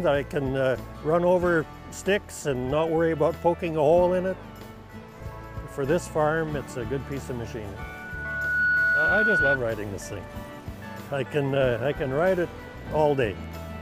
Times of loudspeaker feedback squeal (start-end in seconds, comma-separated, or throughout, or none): 7.77-9.58